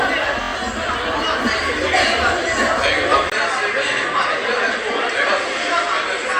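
A recording of everyday sounds, with two bursts of repeated frames and a sudden change in tone partway through. From 0.41 to 0.51 s, a 23.2 ms slice plays four extra times, which fits a single compressed frame being resent. It comes out as a rapid stutter and adds about 93 ms to the clip. On a spectrogram it shows as five identical narrow blocks tiled side by side. The waveform repeats the same short shape.

At 3.30 s the sound goes dull and boxy after a 20 ms dropout, and it stays that way to the end. The likely cause is the input switching to a poorer device. Nothing reaches above 9.8 kHz from that point, the level falls by a few decibels, and a faint new noise floor appears well below the signal. On a spectrogram the top band is cut off sharply at 9.8 kHz, and a brief blank column marks the switch. The waveform shows a flat gap followed by a slightly lower envelope.

A second run of repeated frames falls inside that section, at 3.96 to 4.03 s. 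There a 69.7 ms block, consistent with a run of about three frames, plays once more and adds 70 ms. It is heard as a single hiccup that restarts the passage, and on a spectrogram it appears as a duplicated stretch.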